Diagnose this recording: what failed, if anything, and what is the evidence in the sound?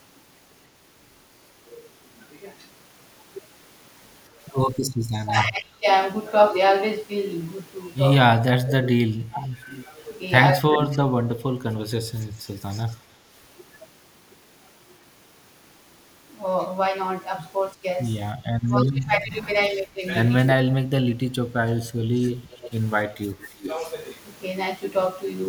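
Speech suppressed in double talk, at the call-processing stage: the voice sinks by up to roughly 30 dB from 4.86 to 5.86 s, 8.27 to 10.74 s and 17.82 to 23.68 s, losing about 3 s in the last stretch. The echo canceller likely mistook the talker for loudspeaker echo and ducked everything. On a waveform the envelope collapses into gaps, and a spectrogram shows energy thinning out or vanishing across the band.

Echo leak, also in call processing: a faint delayed copy of the voice trails behind it from 8.85 to 12.96 s (300 ms delay, about 20 dB down), 19.74 to 20.21 s (324 ms, about 35 dB down) and 22.19 to 23.93 s (332 ms, about 15 dB down). The far-end canceller likely failed to remove all of its loudspeaker pickup. A spectrogram shows a weaker ghost of the harmonic pattern shifted roughly a third of a second later.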